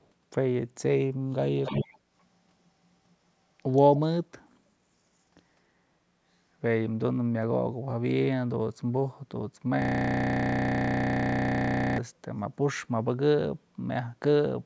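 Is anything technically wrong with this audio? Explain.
Yes, two kinds of fault.

Echo leak, at 0 to 0.09 s and again at 1.63 to 1.99 s: a delayed copy of the speech comes back about 0.3 s late. It's very faint at the start (about 40 dB down) but roughly as loud as the speech the second time. Most likely a far-end speakerphone whose echo canceller didn't catch everything.

System hang loop, from 9.82 to 11.98 s: a 32 ms slice of audio repeats exactly, over and over for about two seconds. At that length it comes across as a steady buzz at about 31 Hz. The driver or system froze while the hardware kept replaying its ring buffer, which fits a 512-sample buffer.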